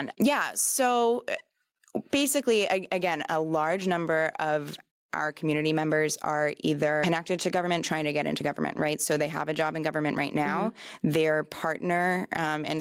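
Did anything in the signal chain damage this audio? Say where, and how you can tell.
Yes. Gain pumping runs through the whole clip: the gain ducks by around 20 dB under every loud syllable, squashing loud and soft together. This is most likely input gain set far too high, with a fast limiter in call processing clamping it. Unlike noise-gate chopping, the floor rises rather than cutting off.

At 7.03 s, right after "our community members are", there is a skip ahead, with audio dropped on the network or by the jitter buffer. Roughly a second and a half of audio vanishes, and the two sides are butted together with no silence. A dropout would leave a gap instead of a direct join.

From 7.15 to 11.08 s a jitter buffer speed-up follows. The talk runs at about 107% speed and sounds hurried, with roughly a third of a second trimmed away in small pitch-period pieces. The pitch stays put, which separates it from a sample-rate mismatch.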